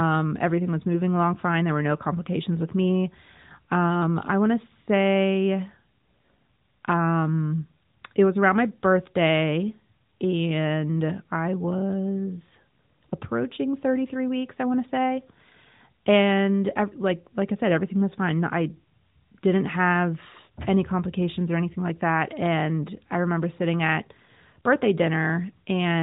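Nothing is technically wrong with this speech clip, which comes through the AMR-NB mobile codec at 12.2 kbps with only light coding damage.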